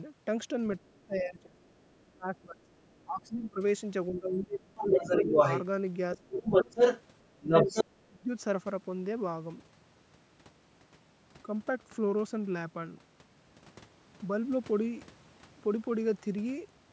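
A speech recording from a call, with two faults. The first is speech suppressed in double talk. The talker's level dips by up to about 25 dB from 0.78 to 5.37 s, 6.17 to 6.78 s and 7.38 to 8.29 s. The likely cause is an echo canceller that could not tell the talker from loudspeaker echo while both sides spoke, so it turned everything down. The second fault is the other side's voice leaking through. A second voice is faintly audible from 2.36 to 3.04 s. It then comes through louder than the talker from 4.77 to 5.62 s and from 6.15 to 7.84 s. This is likely far-end audio from the loudspeaker that the echo canceller failed to remove from the microphone.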